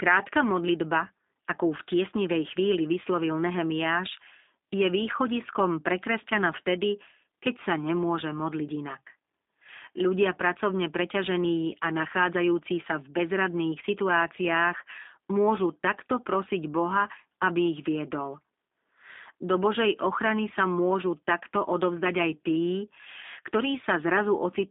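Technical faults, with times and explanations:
Throughout, G.729 codec: the speech is confined to about 250 Hz to 3.7 kHz, with nothing above 3.8 kHz. It sounds plainly rough and synthetic because it is rebuilt from a vocal-tract filter, a pitch predictor and sparse pulses, consistent with an 8 kbit/s codec.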